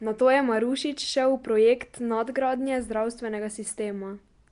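Nellymoser compression throughout: the speech has a rough, hissy, underwater smear and nothing above 10.6 kHz, likely from Nellymoser Asao filling starved bands with noise.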